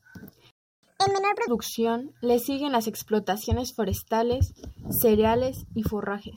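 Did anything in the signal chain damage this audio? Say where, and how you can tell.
Yes, at the playback stage. A playback stall cuts the speech off at 0.51 s and leaves silence until 0.83 s, a gap of about 0.32 s. The player most likely ran short of buffered data or had its output thread blocked, and resumed once it recovered.

Straight after, from 0.83 s to 1.48 s, there is catch-up at higher speed: the speech runs at 1.5 times normal rate, pitched up by roughly seven semitones. The player is resampling its backlog to recover the lost time, then returns to normal pitch and speed.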